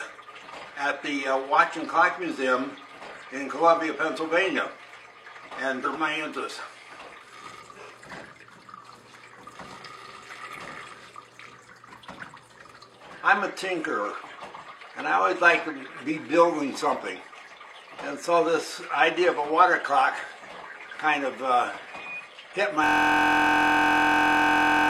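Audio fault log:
5.81–5.87 s and 7.57–7.64 s, damaged data in a compressed stream: brief glitches, as the decoder misreads corrupted frames and resyncs.
22.84 s to end, system hang loop: a steady buzz at about 43 Hz, as one 23.22 ms stretch repeats exactly, which fits a 1024-sample ring buffer cycling after a freeze.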